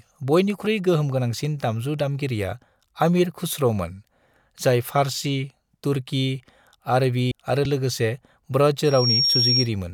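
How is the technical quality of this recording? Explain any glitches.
The recording has three distinct glitches, all in the last few seconds of the speech.

At 7.31 s, compressed frames are skipped. About seven frames never reach the output, either missing from the stream or rejected by the decoder as damaged. With frames of 32 ms, the audio jumps ahead by roughly a fifth of a second. The speech simply lurches forward.

At 7.65 s comes a repeated buffer. Fresh audio arrived late, so the playback device played its last buffer again, twice more. Each buffer lasts only 1.33 ms, which fits a 64-sample buffer. Three identical slivers therefore run back to back with hard edges between them. At this tiny size, it is heard as a click or very brief buzz, not a stutter. Essentially no audio is lost.

From 8.84 s to 9.69 s there is a loudspeaker feedback squeal. A microphone is picking up the loudspeaker it feeds, and at 5.6 kHz the loop gain exceeds one. 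That tone reinforces itself on every pass. It swells over roughly 0.3 s into a piercing whistle. It then sits about 5 dB above the speech until it stops.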